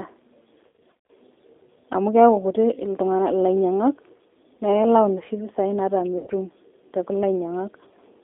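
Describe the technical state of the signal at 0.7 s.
At 0.7 s the speech sits inside a burst of VoIP packet loss concealed by the speech codec, running from 0.67 to 1.10 s. Across those 420 ms about 240 ms of audio went missing in scattered gaps, the longest lasting 80 ms. In each gap the decoder keeps replaying its last pitch and vocal tract filter at falling gain, so the voice smears into a buzzy tone or coloured noise that fades, instead of dropping to silence. That continuation is what separates it from plain dropouts or clicks. Because each rebuilt frame feeds the next, the sound stays weak and distorted between the gaps, not just during them.

Beneath this lies the G.729 codec (the G.729A variant at 8 kbit/s), with its damage plainly audible. The line is confined to roughly 250 Hz to 3.6 kHz, so the speech sounds thin and boxed-in, with a rough, slightly synthetic grain from the sparse pulse excitation. 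Unlike a simple low-pass filter, which only dulls the sound, this coder reshapes the voice itself.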